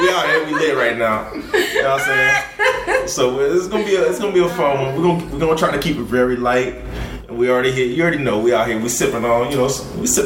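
No technical faults can be heard anywhere in the audio.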